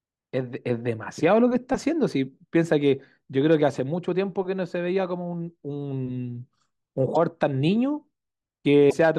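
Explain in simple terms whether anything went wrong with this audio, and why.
Two brief glitches interrupt the speech, at 7.14 to 7.17 s and 8.89 to 8.94 s. Each lasts only a few hundredths of a second, and the sound skips forward. The likely cause is a broken MP3 bit reservoir. MP3 frames store some of their data in earlier frames. When frames go missing, the next frame looks back and finds the wrong data, so it decodes briefly as garbage.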